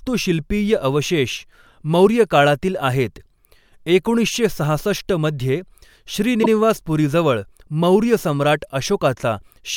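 Speech with repeated frames at 6.42 to 6.49 s: a 72 ms stretch of compressed audio is played a second time, which fits a run of about three codec frames being written twice, so the sound stutters and the clip gains 72 ms. Unlike concealment of lost packets, which fades, smears or fills a gap with synthetic noise, this repeat is an exact copy at full level, with nothing missing on either side.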